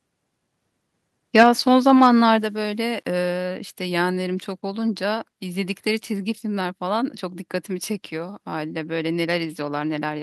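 From 1.36 to 1.48 s the loudest speech peaks turn harsh and crackly. This is microphone overload, likely from input volume set too high for the converter. The input ran about 5 dB past full scale, and a few percent of samples are flattened against the converter's limit. On a waveform the tops look squared off. A spectrogram shows a smear of broadband energy over those peaks.

At 1.43 s, inside that distorted stretch, the speech and its background suddenly get quieter, by about 4 dB. This is the microphone volume stepped down, likely the call software cutting the device gain once it detected the clipping. The waveform envelope shrinks in a single clean step. A spectrogram shows every band dimming at once.

From 1.63 to 3.13 s the quieter parts of the speech turn grainy and buzzy, and the grit follows the sound rather than sitting underneath it as a steady hiss. This is low bit depth without dither, likely the signal being rounded to very few levels, which fits about 9-bit resolution. 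The error sits roughly 40 dB below the signal. Zoomed in, the waveform shows visible stair-steps. A spectrogram shows speckled distortion that rises and falls with the speech.

At 2.43 s, within that grainy stretch, the level drops again by about 5 dB. This is a second microphone volume step-down, likely another automatic gain cut. On both the waveform and the spectrogram it appears as another abrupt, across-the-board fall in level.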